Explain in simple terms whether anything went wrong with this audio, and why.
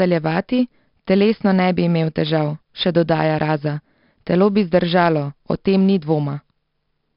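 4-bit ADPCM compression affects the whole speech clip. Each sample is stored as a tiny guessed step, so a gritty hiss rides on every loud sound and sharp attacks crunch. The damage is heavy, and nothing is heard above about 5.3 kHz, so everything sounds dull.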